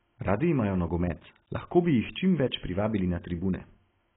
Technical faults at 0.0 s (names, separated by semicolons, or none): AAC compression